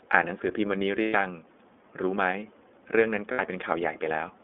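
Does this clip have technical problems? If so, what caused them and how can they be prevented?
Yes. Throughout the speech the sound is narrow and thin, with nothing below about 250 Hz or above about 3.5 kHz, and it has a plainly audible rough, slightly synthetic edge. This is the iLBC codec at work. It is a narrowband VoIP coder that encodes each 30 ms frame's excitation independently, and its coarse modelling produces that grainy texture, which fits its 13.33 kbps mode. Using a wideband codec such as Opus for the call would prevent this.

Twice the speech gives way to a held, faintly buzzy vowel-like tone: from 1.02 to 1.15 s, about 120 ms, and from 3.32 to 3.41 s, about 60 ms. These are lost iLBC frames. When packets went missing, the decoder filled the gap by repeating the last pitch cycle blended with noise. The longer gap fits four lost 30 ms frames and the shorter one two. Because each iLBC frame decodes on its own, the voice is right again almost at once after each gap. 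A more reliable network path, plus a jitter buffer or forward error correction, would prevent these dropouts.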